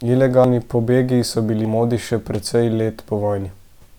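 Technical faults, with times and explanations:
0.44 s and 1.65 s, compressed frames skipped: whole compressed frames never reached playback, one at 0.44 s and two at 1.65 s, so the speech jumps ahead by roughly 100 ms and then 200 ms, matching a frame near 93 ms.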